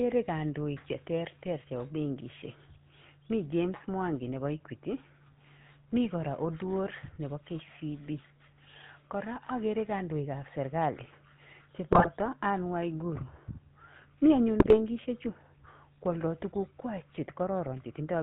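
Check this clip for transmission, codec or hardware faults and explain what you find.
Two faults are present: GSM full-rate codec coloration across the whole recording, and two short bursts of GSM bit errors.

The GSM full-rate codec effect runs from start to finish and is plainly audible. The speech is rebuilt from a vocal-tract filter driven by a sparse pulse train, so it sounds buzzy and gravelly. Nothing above 4 kHz survives, consistent with the 13 kbps full-rate coder.

GSM bit errors occur from 11.92 to 12.08 s and from 14.60 to 14.80 s. Corrupted filter, pitch and gain parameters reach the decoder for several consecutive frames, bending the spectrum and level. The speech briefly breaks into squawks, pops and gargling.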